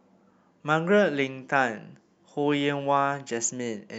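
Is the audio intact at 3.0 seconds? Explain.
Yes, the speech at 3.0 seconds plays through cleanly, with no dropout, click, distortion or other fault at that moment.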